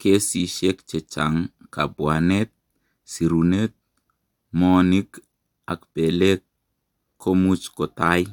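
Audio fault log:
No technical faults can be heard in this speech.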